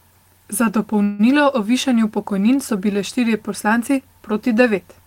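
At 1.03 s the speech stalls and the last sound is drawn out as a fading buzz or hiss until 1.21 s, roughly 160 ms of filler with no true silence. This is a call audio freeze, likely from packets arriving late and the jitter buffer running dry. When the audio resumes it picks up exactly where it stopped, so nothing is lost, but everything after that point now plays about 157 ms later.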